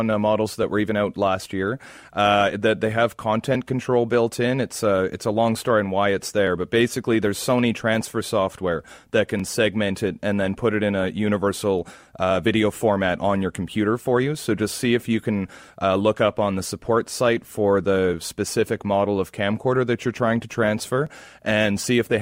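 From 0.63 s, just after "uh models", to 21.07 s, a click recurs roughly every 2.92 s, about seven times, likely clock drift buffer slips of roughly 70 samples.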